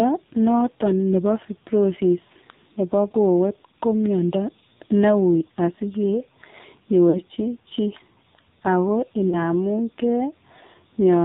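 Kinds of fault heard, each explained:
AMR narrowband mobile codec: the whole clip is squeezed through the old 2G/3G speech coder at what sounds like its low 5.9 kbps mode, so nothing above 4 kHz survives. The voice comes out heavily buzzy and synthetic, with the pulse-driven vocal tract model clearly showing through.
Lost AMR speech frames: bad radio frames get papered over by the decoder repeating its last good settings at dropping gain. Around 7.10 to 7.24 s a couple of frames go, giving a smeared, fading patch, and near 9.30 s a single frame causes a shorter dip.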